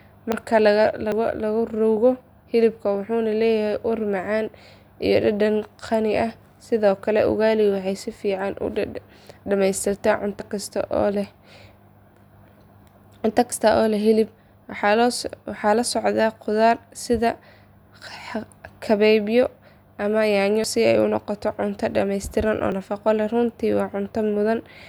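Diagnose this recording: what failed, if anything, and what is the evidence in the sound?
The speech has six abrupt skips, each with the sound jumping forward and no gap of silence: at 0.32, 1.12, 10.4, 13.52, 20.64 (between "kabeebyo ama yaanyo" and "si ay u noqoto") and 22.72 s (just after "noqoto cunto dhameystiran oo"). Most lose around 40 ms; the one at 13.52 s loses nearer 70 ms. That points to the driver or buffer stage, likely a dropped buffer (overrun), where the capture software fell behind, a block got overwritten, and the two sides were spliced together.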